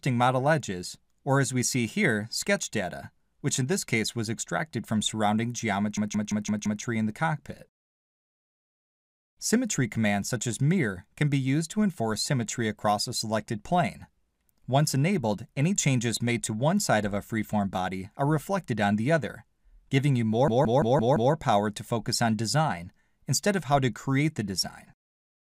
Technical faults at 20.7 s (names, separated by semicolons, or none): system hang loop